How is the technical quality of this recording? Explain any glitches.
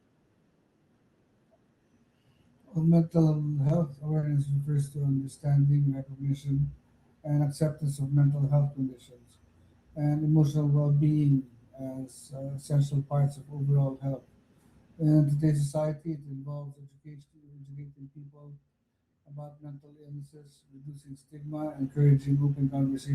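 The recording has three brief technical glitches, two network-related and one from a stepped level change.

At 3.67 to 3.72 s there is a short stall from a late packet. A packet arrived late, the jitter buffer emptied, and the receiver held the last sound for about 20 ms before resuming. Nothing is lost, but a sound drags slightly. On a spectrogram it appears as a short stretch of frozen, flat harmonics.

At 4.19 to 4.26 s, just before "refers to understanding recognition", there is short concealed packet loss. About 40 ms never arrived, so the decoder extrapolated the preceding sound and crossfaded back, producing a quick smear or wobble. The waveform shows a smoothed, repetitive patch, and the spectrogram shows blurred detail there.

From 21.30 to 21.86 s, right after "about mental illnesses reducing", there is zipper noise. The level changes by about 15 dB in 1 dB jumps, roughly fifty per second, with no smoothing. 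Each jump clicks, giving a fine ticking texture. The waveform envelope looks like a staircase, and the spectrogram shows faint vertical lines at each step.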